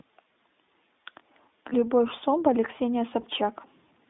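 Throughout, the speech carries iLBC codec damage: a rough, synthetic narrowband sound, with the spectrogram empty above 3.7 kHz and below 250 Hz. This fits iLBC's 15.2 kbps mode with 20 ms frames.

At 1.70–1.74 s and 3.22–3.26 s, lost iLBC frames appear. In each case one 20 ms frame is replaced by a repeated pitch cycle mixed with noise, which sounds like a brief buzzy held vowel and shows as smeared, flattened harmonics. The sound recovers immediately afterwards.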